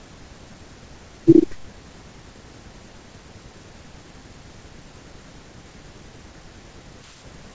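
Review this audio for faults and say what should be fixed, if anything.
No faults; nothing needs fixing.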